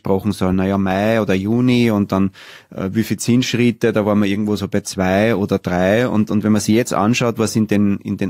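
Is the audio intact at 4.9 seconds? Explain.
Yes, the audio is intact at 4.9 seconds, with no dropout, click or distortion at that point.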